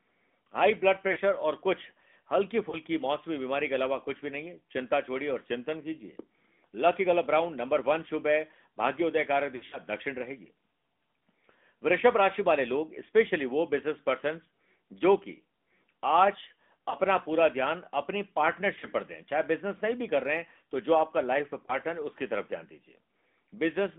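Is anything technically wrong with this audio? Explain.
Yes. The whole clip passes through the AMR narrowband mobile codec. Nothing outside roughly 200 Hz to 3.5 kHz survives, and the clearly audible buzzy, synthetic edge to the speech, which fits the 10.2 kbps mode, comes from a pulse-driven vocal-tract model. A plain low-pass filter would sound muffled but not buzzy like this.

Lost AMR speech frames occur at 1.12, 2.70, 9.56 to 9.78, 16.90, 18.80 and 21.66 s. The decoder patches each gap by repeating the last pitch and tract settings at a falling gain. What you hear is a brief warble or dip, not a hard click or silent dropout. The longest event is at 9.56 s, where about 120 ms of loss is scattered over 160 ms and the sound smears before it recovers.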